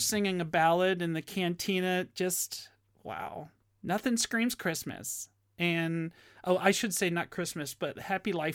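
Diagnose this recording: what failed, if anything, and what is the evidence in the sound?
Nothing failed; no fault is audible anywhere in this recording.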